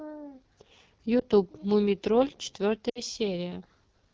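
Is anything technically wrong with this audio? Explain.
Yes, there are two faults in this speech clip.

Throughout, the AMR wideband (HD Voice) codec is running at 8.85 kbit/s, one of its lowest rates, so the speech sounds plainly rough and raspy. The vocal tract model is starved of bits. On a spectrogram, harmonics look smeared below 6.4 kHz, and the band up to 7 kHz is filled with diffuse noise and then cut off sharply.

There are also lost AMR speech frames from 1.19 to 1.24 s and from 2.89 to 3.02 s. The decoder repeats the last good settings at falling gain. The first event is a brief dip or warble, consistent with one lost 20 ms frame. The second drops to near silence within two frames, which suggests about 60 ms lost. The waveform shows a dip in the envelope, and the spectrogram shows frozen, weakening harmonics before rough recovery.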